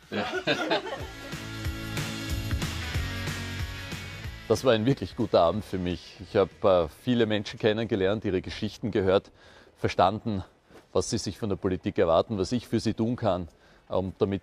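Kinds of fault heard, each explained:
No faults are audible anywhere in this audio.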